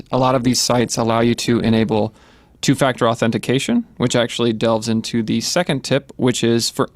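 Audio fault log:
0.0–2.0 s, adaptive stream starting at a low bitrate: the speech begins dull, with thin synthetic treble and stronger codec smearing, which fits a stream near 16 kbit/s. At 2.0 s the quality steps up abruptly without a gap, fitting a switch to around 64 kbit/s. A spectrogram shows a sudden widening of high-frequency content at that point.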